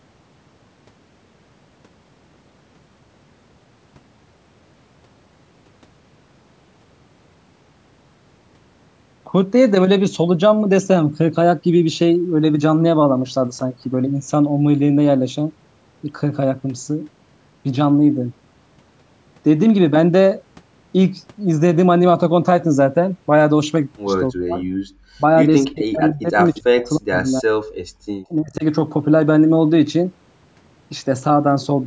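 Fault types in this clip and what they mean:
Speech suppressed in double talk: From about 24.3 to 28.6 s the speech dips by up to about 40 dB or breaks off in pieces, worst from 25.73 to 27.19 s. This is likely an echo canceller mistaking simultaneous talk for loudspeaker echo and turning both down.
Background gated by the echo canceller: The room sound drops by about 38 dB for brief moments at 24.85 to 24.9 s and 27.85 to 28.11 s, then returns. The canceller is clamping the microphone hard while the loudspeaker plays, then releasing it.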